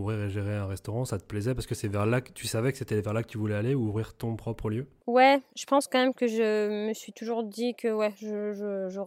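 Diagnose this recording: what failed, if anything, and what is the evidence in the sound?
Nothing failed here: the speech runs steadily with no dropouts, glitches or other audible faults at any stage of the chain.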